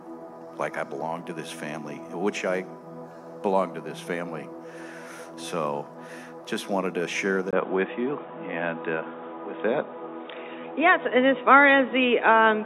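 Input switched to a poorer device at 7.51 s onward: after a roughly 20 ms gap, the sound turns dull and boxy, with nothing above 3.8 kHz, a level shift of about 5 dB and new background noise about 30 dB down, likely from a narrower-band microphone taking over.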